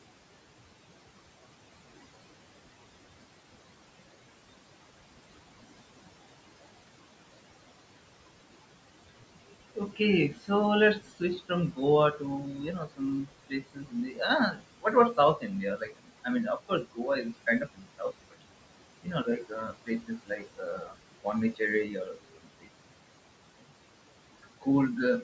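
Noise suppressor artifacts run through the whole speech clip. The suppressor pulls the room noise down by about 21 dB wherever it judges a band to be steady noise, so the background drops away between phrases and returns underneath them.

Speech cut by the noise suppressor follows in five stretches: 9.09 to 10.5 s, 10.99 to 11.8 s, 12.12 to 18.43 s, 19.03 to 22.69 s, and briefly at 23.61 to 23.75 s. Here the suppressor mistakes parts of the speech for noise and turns them down with the background, by about 18 to 22 dB at the deepest. Soft consonants and word endings sound swallowed or faint. The losses add up to a few seconds in the two longest stretches, and to a fraction of a second in the others.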